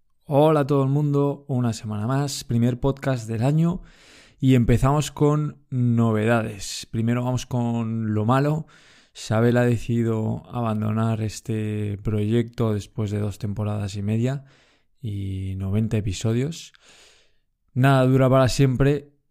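No technical faults are audible.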